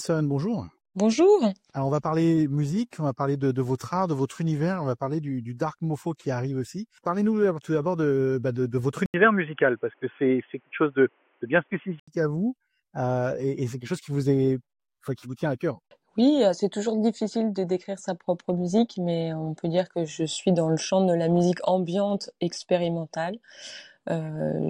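From 9.06 to 12.08 s the input was likely switched to a poorer device, then back. After a gap of 80 ms at the switch, the band is cut off with nothing above 3.4 kHz, so the sound turns dull and boxy. The level shifts by about 5 dB, and a faint new background noise sits roughly 45 dB below the signal. At 12.08 s the fuller, clearer sound returns.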